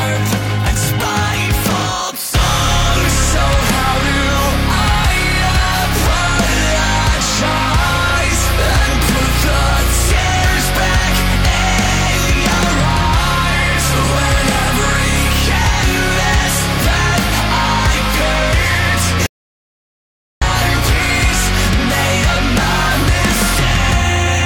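At 19.26 s the sound cuts off abruptly mid-flow and gives way to silence, with no room tone or background hiss underneath, until it returns just as suddenly at 20.42 s. This is an audio dropout to silence lasting about 1.15 s, and whatever occurred in that stretch is simply absent. The likely cause is a momentary loss of the input signal, such as a disconnected device or a failed link, while recording carried on writing silence.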